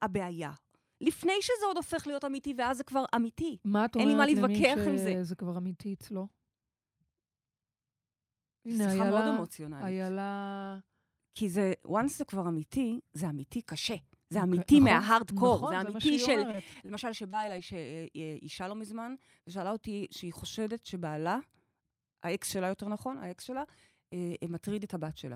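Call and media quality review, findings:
Repeated packet loss (robotic sound), 16.51–16.91 s. Choppy speech. Network path dropping packets in quick succession; four gaps, longest about 21 ms, each patched by extending prior audio. Roughly a fifth of the stretch is synthetic fill.

Short concealed packet loss, 17.31 s. Brief smear. About 20 ms never arrived; decoder concealment extended the preceding sound, then blended back. Onset detail at that point may be lost.

Short stall from a late packet, 18.25–18.30 s. Sound held slightly long, slight buzz or dip. Jitter buffer underran when delay rose about 25 ms; last audio stretched until the packet landed. Nothing missing.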